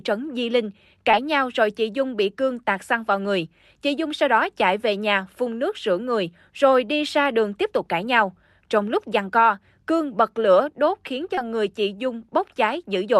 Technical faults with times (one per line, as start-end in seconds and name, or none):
1.11-1.15 short concealed packet loss
11.35-11.39 short concealed packet loss